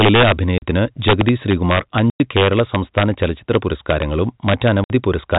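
Speech heard over a G.711 telephone channel, where nothing above 4 kHz comes through, with sharp, violent cracks on the loudest peaks throughout. That is integer overflow: the level is pushed about 5 dB too hot, and the small fraction of samples past the integer limit wrap to the opposite sign instead of being held. The sound also drops into dead silence with hard edges at 0.58–0.62 s, 2.1–2.2 s and 4.84–4.9 s, gaps of 40, 100 and 60 ms. This is packet loss filled with silence, and the lengths fit lost 20 ms packets.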